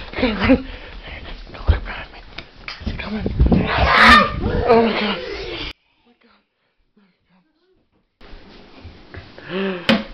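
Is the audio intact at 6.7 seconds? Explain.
No, one channel inverted affects 5.71 to 8.21 s. From there the sound drops by about 32 dB and turns faint, likely because one stereo channel has reversed polarity, so whatever both channels share cancels when they are summed to mono.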